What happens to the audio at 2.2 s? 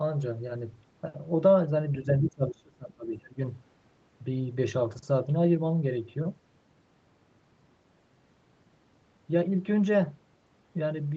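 From 2.04 to 3.37 s the speech sinks, dropping by roughly 25 dB at its deepest, with about a second and a half affected in total. The likely cause is speech suppressed in double talk: with both ends talking, the echo canceller mistook the near talker for loudspeaker echo and attenuated it. Unlike packet-loss dropouts, the dips are uneven and follow the competing talk, not clean, fixed-length holes.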